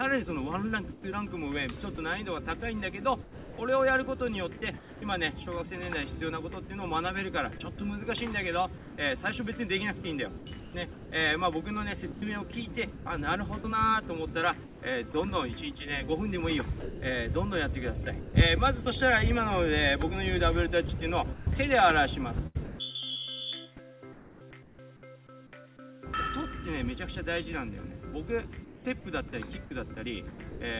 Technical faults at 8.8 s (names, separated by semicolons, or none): sound chopped by the voice detector